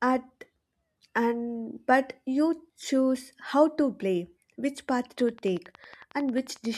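Speech, and right after "to play which path" a train of clicks runs from 5.2 s to 6.76 s: about twenty evenly spaced ticks at 11 per second, roughly as loud as the voice, likely interference or a faulty connection.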